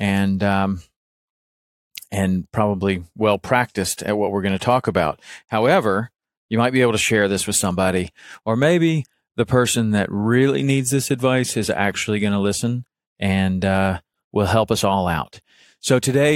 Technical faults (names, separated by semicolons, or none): none